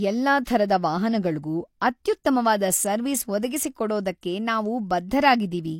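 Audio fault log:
0.45 s and 2.24 s: pre-echo. A hiss of 18 ms and 13 ms precedes two sharp speech onsets, as the codec spread noise sized for each attack across the quiet start of its block; spectrogram and waveform show a broadband smear ahead of each transient.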